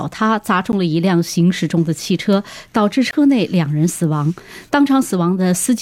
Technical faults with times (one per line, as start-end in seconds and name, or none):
0.72 block of digital silence
3.11-3.13 block of digital silence